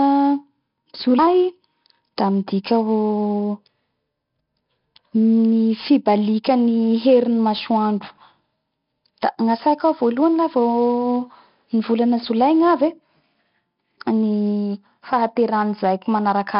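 From start to finish, heavy 4-bit ADPCM compression coarsens each sample into small predicted steps. The speech carries level-following gritty hiss, and nothing sounds above 5.3 kHz.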